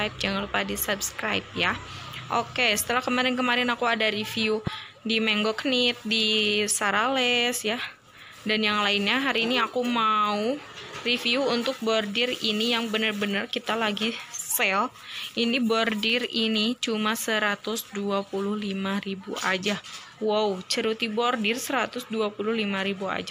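At 3.48 s and again at 16.10 s there is a single sharp click, likely dropped samples: a few samples missing, so the waveform jumps abruptly. At 4.67 to 4.70 s a loud pop rises about 10 dB above the sound, likely a voltage pulse added to the signal, with the sound continuing underneath.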